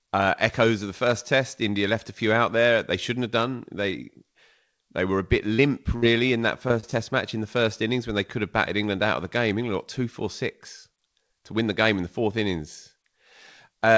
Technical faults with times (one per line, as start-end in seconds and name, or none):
5.54-5.60 short concealed packet loss
5.96-6.04 burst of packet loss
6.68-6.94 short concealed packet loss